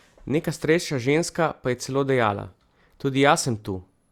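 No technical faults are audible.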